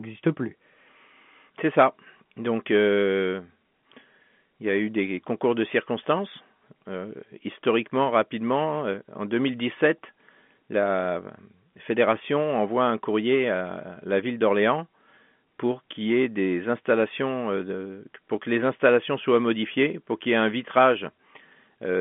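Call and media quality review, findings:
No faults found in this speech clip. The G.711 telephone coding path is audible only as narrowband line audio, with nothing above about 3.6 kHz, consistent with a 64 kbps A-law call.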